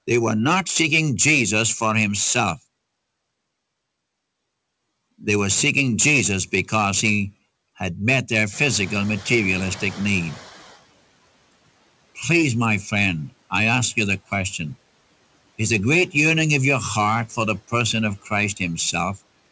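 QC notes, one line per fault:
8.52–10.43 s, noise suppressor catching up: room noise jumps after "he had met their"; the lagging noise estimate lets it through, then trims about 6 dB over 1.9 s.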